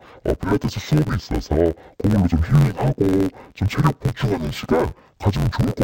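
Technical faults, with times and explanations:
Throughout, interleaved audio read as planar. The speech sounds dull and robotic, buzzing near 86.1 Hz. Alternating samples in each 11.61 ms block, fitting a 512-sample buffer, are split into halves, one per channel. Both play at half speed, so pace holds. Such short blocks give no clear octave drop.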